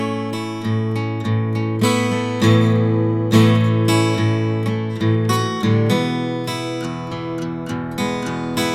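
No technical faults turn up anywhere in the music.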